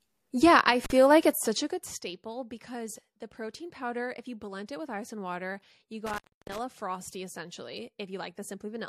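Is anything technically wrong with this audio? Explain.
Yes, there are two faults. Intermittent contact: a loose cable or plug momentarily breaks the connection, at 0.84 to 0.92 s (open for about 41 ms) and at 6.06 to 6.59 s, right after "ice and water you" (open for about 288 ms). Each time the speech drops out, with crackle where it cuts off and returns and faint hiss in between.

Pre-echo: at 4.66 s, between "protein powder if you" and "it with ice and", the codec spreads quantisation noise for a sharp attack across a block of about 36 ms. That points to it not switching to short blocks. About 11 dB of hiss leaks roughly 19 ms ahead of the attack, which sounds softened and smeared.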